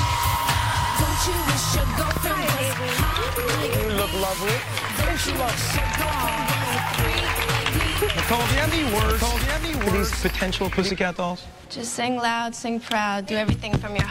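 From 8.18 s to 10.9 s a doubled audio track appears, likely because the same signal reached the mix twice, either captured a second time through a slower path or left as two misaligned copies in an edit. A full-band duplicate trails the original by about a second, somewhat quieter, with no decay or room colour, so everything is heard again as a distinct repeat. The copy cuts in and out abruptly at both ends.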